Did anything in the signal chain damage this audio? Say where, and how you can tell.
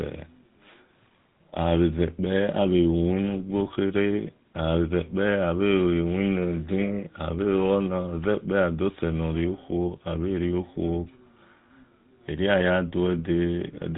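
Yes. GSM full-rate codec damage runs throughout the speech, so the harm happened at the codec stage. Nothing gets through above 3.9 kHz, which dulls the sibilants, and the voice carries a plainly audible buzzy, gravelly roughness. That comes from the codec rebuilding speech through a vocal-tract filter fed by a sparse, regularly spaced pulse excitation, with most excitation samples discarded. The coarseness fits a roughly 13 kbps full-rate stream.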